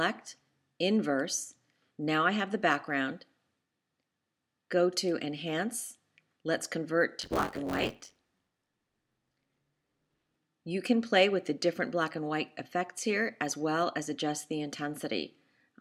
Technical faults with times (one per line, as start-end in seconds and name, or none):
7.20-10.38 buffer tearing